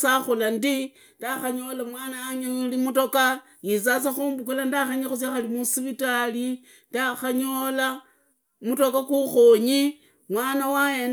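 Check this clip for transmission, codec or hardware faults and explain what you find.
No faults detected here.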